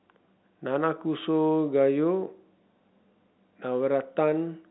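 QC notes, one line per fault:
No fault to note; the speech carries the narrow telephone band of G.711 coding, with nothing above 3.9 kHz.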